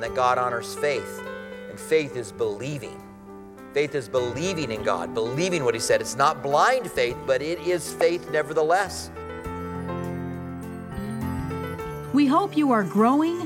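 Nothing here needs flagging, since the audio runs its whole course without a single technical fault turning up anywhere along the way.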